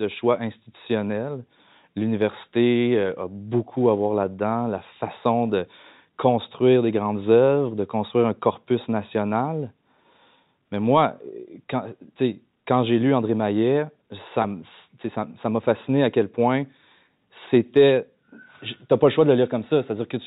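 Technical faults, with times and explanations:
14.42–14.44 s, packet loss with pitch repetition: about 20 ms of speech, which fits one lost packet, is bridged by repeating the last pitch period just before "m'a fasciné à quel". The gap sounds like a brief, slightly buzzy held tone rather than a silent dropout or a click.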